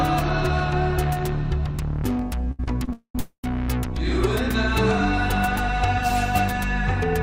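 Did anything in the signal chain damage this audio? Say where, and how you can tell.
Yes, at the network stage. Three short stalls from late packets sit at 2.51 s, 2.64 s and 2.85 s, lasting 75, 30 and 27 ms. Each holds the last sound, then resumes at the same point. Unlike packet loss, nothing is skipped; the audio just runs later.

Two call audio freezes follow, at 2.93 to 3.15 s and 3.19 to 3.45 s, about 220 and 240 ms. The held sound decays into roughly 100 and 90 ms of silence before resuming intact, most likely because packets were held up in transit. Their length and silent tails set them apart from the brief stalls.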